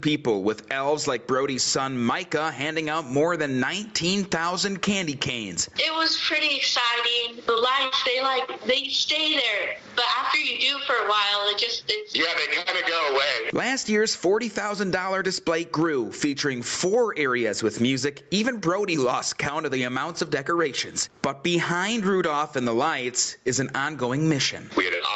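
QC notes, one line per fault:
Throughout, gain pumping: the gain swings by around 10 dB, so loud and soft passages sit close in level and the audio sounds squashed and breathing. The likely cause is input gain set far too high for the microphone, with a fast limiter or compressor clamping down on each peak and releasing in the pauses. This is audible across the call-band audio, which carries nothing above 8 kHz.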